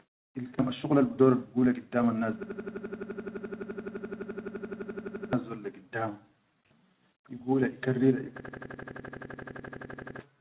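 At 0.59 s there is a skip ahead: a stretch of about a fifth of a second was discarded while later audio was already queued, so playback jumps forward with no gap at all. The syllables on either side are spliced directly together. On the waveform the envelope changes shape abruptly with no silent gap, and the spectrogram shows a clean vertical seam where the formant tracks break and restart.

From 0.70 s to 2.22 s a jitter buffer speed-up follows, as the receiver drains excess delay by repeatedly cutting short pitch-period-sized pieces, roughly a tenth of a second in total. The sound runs at 106% speed with unchanged pitch, so it feels slightly hurried. The spectrogram keeps harmonic spacing constant while syllables are compressed in time, with tiny discontinuities at the cut points.

From 2.43 s to 5.33 s, ending just before "dol da giddama", a system hang loop takes over. The system stalled while the hardware kept replaying the same 85 ms block, which fits a 4096-sample buffer, about 34 times at 11.7 Hz, and it sounds like a machine-gun stutter. 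About 3 s of audio is lost. The same fault returns from 8.40 s to 10.19 s, with 21 repeats and about 2 s lost. On the waveform each stretch shows identical blocks tiling exactly, and the spectrogram shows a vertical stripe pattern repeating every 85 ms. Throughout, the call path, consistent with G.711 mu-law, leaves nothing above 4 kHz.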